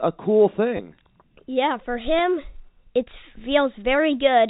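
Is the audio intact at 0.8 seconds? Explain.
No. From 0.77 to 0.79 s the speech breaks into a brief robotic stutter: a fleeting buzz where the same fragment plays back to back. This is packet loss with the last packet repeated. About 20 ms of audio never arrived, and the receiver filled the gap by replaying the most recent packet. The repeat pattern fits two 10 ms packets.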